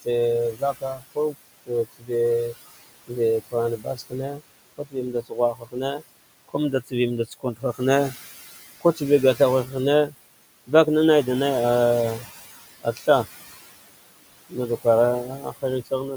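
A speech clip with noise suppressor artifacts throughout. The room noise sits about 15 dB below the speech. The suppressor pulls it down by about 18 dB between phrases and lets it back up under the speech. Speech cut by the noise suppressor appears at 0.02–2.54 s, 3.07–8.14 s, 8.81–10.14 s, 12.81–13.08 s and 14.49–15.92 s. The suppressor mistook quiet parts of the speech for noise and dropped them by about 17 to 21 dB. The affected parts sound swallowed, adding up to roughly a second and a half within the 3.07–8.14 s stretch.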